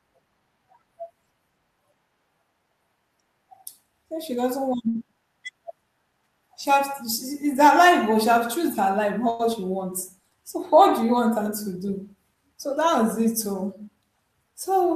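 A short stall from a late packet occurs at 4.88 s, just after "she doesn't", and again at 9.30 s, after "have choose her life". Each time the jitter buffer ran dry and the receiver held the last sound, for 66 ms and then 95 ms, until the late packet arrived. Nothing is lost, but the sound hangs slightly too long with a faint buzz or dip.

A short concealed packet loss follows at 9.52 s. About 40 ms of audio never reached the decoder, and only a few milliseconds were patched before the receiver jumped ahead. The result is a quick smear or wobble.

A jitter buffer slow-down runs from 9.90 to 10.37 s. To rebuild its reserve, the receiver repeated tiny pitch-period slices and added 36 ms. The speech plays at 94% speed at unchanged pitch, so sounds are slightly drawn out.

A jitter buffer speed-up runs from 13.00 to 14.04 s. The buffer had grown too full, so the receiver trimmed short pitch-period pieces, about a tenth of a second in total. 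The speech plays at 108% speed at the same pitch and sounds a little hurried.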